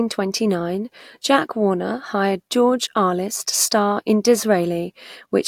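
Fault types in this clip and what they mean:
No faults can be heard.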